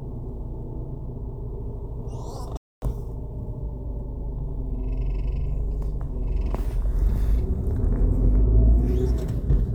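At 2.57 s the sound cuts out for 250 ms, a playback stall, likely the player starving for data or being blocked, before resuming at 2.82 s.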